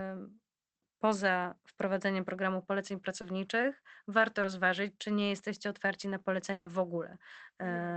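At 2.37 to 2.39 s, just after "poza wprowadzeniem", comes the first short concealed packet loss, then two more at 3.21 to 3.24 s and 4.41 to 4.44 s, the last just before "rozważyć czy nie". Each time about 10 to 20 ms of the call reached the decoder too late, and the receiver patched the hole by extending the preceding sound. Each is heard as a quick smear or wobble. On a spectrogram, harmonics run on unnaturally smooth for a few hundredths of a second. In the waveform, the cycles repeat too regularly before blending back.

Between 5.39 and 5.74 s, after "warto rozważyć czy nie", three CD scratch ticks occur. A blemish on the disc destroyed more data on each pass than error correction could rebuild, so the player interpolated or muted a tiny stretch of samples. Each tick is well under a millisecond long. They are heard as evenly spaced clicks. In the waveform they appear as isolated spikes or notches, and on a spectrogram as thin vertical lines through all frequencies.

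At 6.52 to 6.67 s a burst of packet loss removes 140 ms. The receiver held the last sound and let it decay, so a held buzz or fading hiss replaces the real audio, which then resumes further along with that stretch gone. A spectrogram shows frozen, dimming bands ending at a hard seam. Through the Opus call path at around 20 kbps, the whole spectrogram stops near 8 kHz.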